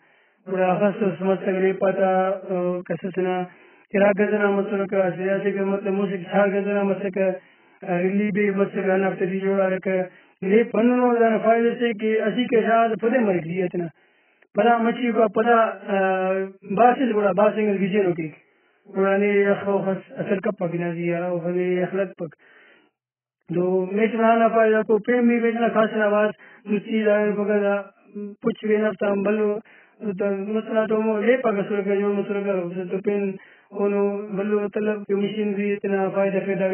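From start to end the speech carries heavy codec damage, likely AAC compression at a very low bitrate, around 8 kbps. Nothing survives above about 3.1 kHz, so it sounds dull and muffled, with warbling sibilants; a spectrogram shows a flat ceiling and patchy, holed bands beneath it.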